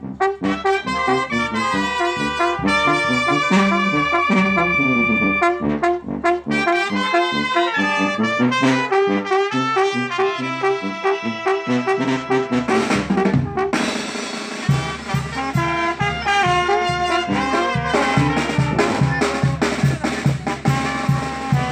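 Nothing goes wrong anywhere in the clip, so there's no fault here to point to.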